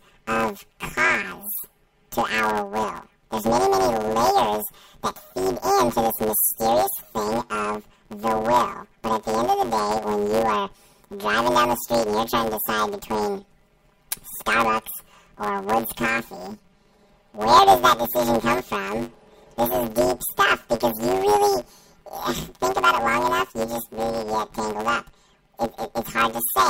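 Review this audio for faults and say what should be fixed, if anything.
Planar audio read as interleaved runs throughout this speech. Each 10 ms block of left samples followed by right samples is taken as alternating pairs, so every block plays twice at double speed, giving a robotic 100 Hz buzz with no clear octave shift. To prevent it, check the buffer layout flag and interleave planar data before any code that expects interleaved frames.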